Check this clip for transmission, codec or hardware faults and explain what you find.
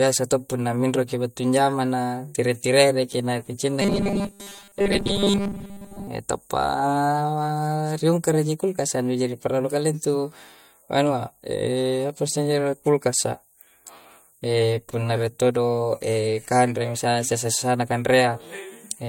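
One fault is present: robotic sound from repeated short buffers, 3.82 to 6.07 s, after "na ki cinna". Speech becomes a rigid metallic buzz at 200 Hz. Audio likely arrived too seldom, so 5 ms chunks were repeated, roughly 70% of the time.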